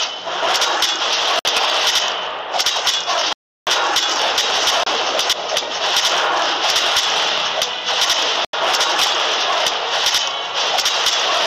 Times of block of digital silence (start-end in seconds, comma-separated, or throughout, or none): 1.39-1.45, 3.33-3.67, 4.83-4.86, 8.45-8.53